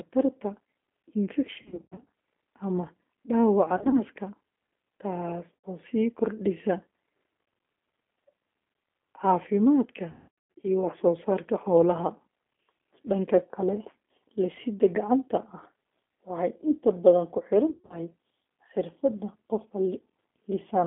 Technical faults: G.729 codec; VoIP packet loss concealed by the speech codec

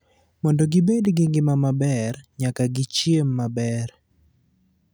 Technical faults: loud pop

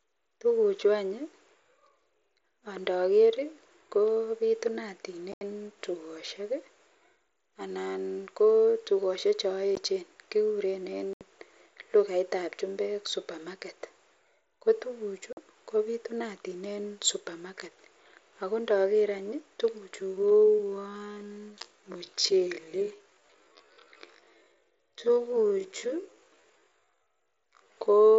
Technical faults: unconcealed Bluetooth headset packet loss; time-stretched section

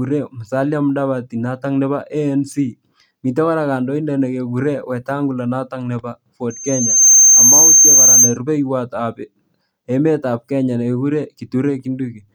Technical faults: loudspeaker feedback squeal

